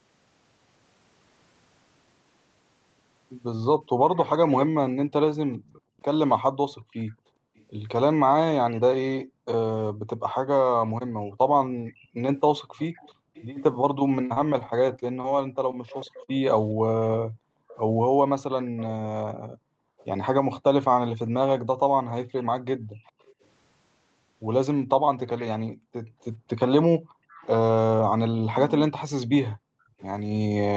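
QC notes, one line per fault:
4.14–7.65 s and 10.87–30.05 s, echo leak: a delayed copy of the speech comes back about 415 ms behind the original, around 20 dB below it in the first stretch and about 25 dB below in the second, which runs to near the end. This is likely the far side playing the call on a loudspeaker, with its echo canceller failing to strip out what its microphone picked up, so the residue was sent straight back into the call.
5.81 s to the end, background gated by the echo canceller: from here the room sound keeps dipping and dropping out, at its deepest by about 40 dB, then returning. Each time the loudspeaker plays, the canceller turns the microphone down hard to suppress echo, and the background is pulled down along with it. It recovers once the canceller releases, so the ambience pumps in and out rather than staying steady.
14.26–15.26 s, repeated packet loss (robotic sound): over this one-second stretch the speech turns choppy, with seven holes in quick succession, the longest 39 ms. 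Packets kept arriving late or not at all, and each gap was patched by extending the last sound, 136 ms of patching in all, about 14% of the span. About 120 ms of real audio is simply gone, which is why pieces are missing.
15.72 s, short stall from a late packet: a sound is held slightly too long for about 15 ms. One packet was not there when due, the jitter buffer ran dry, and the receiver stretched the last sound until it arrived, then carried on from the same point. Nothing is lost, but playback delay grew by about 15 ms.
16.24–16.30 s, short concealed packet loss: a brief smear or wobble in the speech. Around 40 ms of audio never reached the decoder in time, and the receiver filled the hole with roughly 37 ms synthesised from the preceding sound before blending back into the real signal. Anything short in that window, such as a consonant, can disappear. Throughout, the call codec limits the audio to nothing above 8 kHz.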